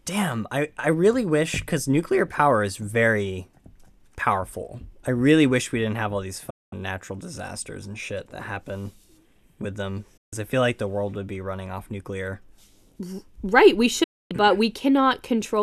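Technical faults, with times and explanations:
6.50–6.73 s, 10.17–10.33 s and 14.03–14.31 s, digital broadcast dropout: the speech snaps to silence three times, with holes of about 0.22, 0.14 and 0.26 s, each entered and left through a fade of roughly 8 ms, then resumes further on. The receiver stopped getting decodable frames, either from lost signal or failed checksums, and muted until valid frames returned. The gap lengths fit whole frames of about 24 ms, and the audio sent during each hole is gone.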